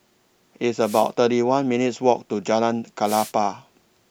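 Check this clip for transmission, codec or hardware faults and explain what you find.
Two wireless microphone noise hits occur in the speech. The first runs from 0.81 to 1.10 s, the second from 3.04 to 3.32 s. Each lasts about 0.3 s. The analogue FM radio link fades as reflected signals cancel the direct one. Receiver noise then rises. Both are heard as a brief swish of static before the signal recovers.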